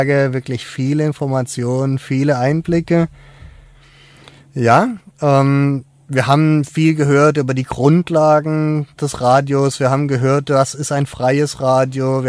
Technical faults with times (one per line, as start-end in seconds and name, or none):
none